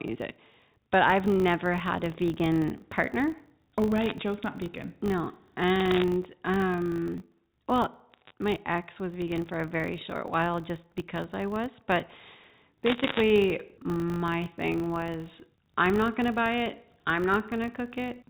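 A speech recording carried over a G.711 mu-law telephone path, whose 4 kHz bandwidth ceiling is audible, has two faults. A filter restarted on every block throws away its stored state at each block boundary and begins again from silence, so every block opens with a small transient. Here these arrive 50 times a second, which points to 20 ms blocks. The result is a steady 50 Hz buzz under the whole clip, swelling and fading with the speech level. Bit errors on a digital phone line flip individual bits in the G.711 stream, each one corrupting a single sample. Where a high-order or sign bit is hit, that sample jumps and produces a sharp tick. Four bursts of crackle appear over otherwise intact speech, at 4.01 to 4.11 s and 5.80 to 6.04 s, each with an error rate of well under one percent. Another falls at 8.12 to 8.33 s, just before "my ex was vegan", at a similar rate, and the densest and longest is at 12.86 to 13.21 s, at roughly one and a half percent.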